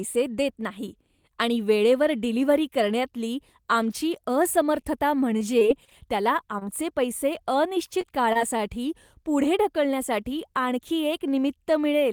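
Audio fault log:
4.81–6.63 s, scattered short gaps: about five lost or late packets were patched by extending the preceding sound, roughly 100 ms in all, giving brief ticks and smears.
8.01–8.61 s, repeated packet loss (robotic sound): three holes in quick succession, 59 ms concealed, longest 22 ms, so the continued sound turns choppy.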